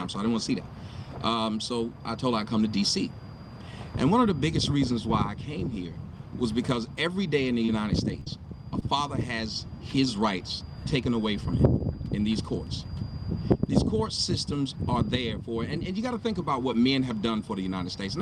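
Short concealed packet loss occurs four times, from 7.65 to 7.70 s, 8.20 to 8.24 s, 8.24 to 8.28 s, and 8.80 to 8.83 s. Each time, about 20 ms of audio did not reach the decoder in time. The receiver patched each gap by extending the preceding sound, then crossfaded back into the real signal. Each event is heard as a brief smear or wobble. The two back-to-back losses near 8.2 s run together into one longer smear.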